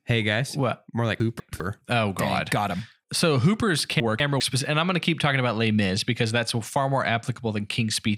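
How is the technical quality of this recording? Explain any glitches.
The recording has two glitches, both chunks out of order. From 1.2 to 1.6 s and again from 4.0 to 4.4 s, just before "and I'm going to", a 200 ms chunk plays one chunk late, after the chunk that should follow it. That produces a jumbled moment with three hard joins. Unlike a dropout, nothing goes missing; the same audio is simply heard in the wrong order.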